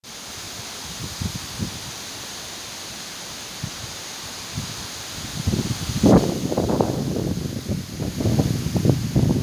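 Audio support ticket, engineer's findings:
No audible faults found; nothing to escalate.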